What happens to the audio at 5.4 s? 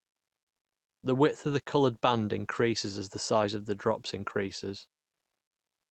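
Nothing goes wrong at 5.4 s: the speech carries on intact through the call path at that point, with no dropout, glitch or other fault.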